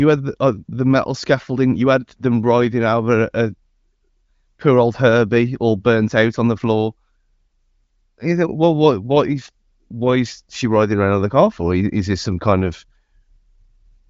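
No technical faults are audible.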